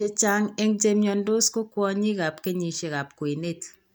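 Nothing goes wrong anywhere in this bit of speech, so there's no fault to point to at any moment.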